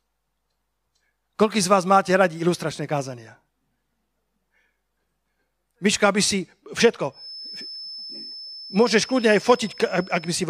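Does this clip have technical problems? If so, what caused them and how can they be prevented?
Yes. A feedback whistle runs from 7.09 s to the end of the clip: a thin, steady 5.2 kHz tone sitting well below the speech and swelling and fading slowly in level. It is likely caused by the loudspeaker-to-microphone loop hovering just at the feedback point, sustaining that one frequency. Lowering monitor gain, moving the microphone away from the speakers, or notching out 5.2 kHz would prevent it.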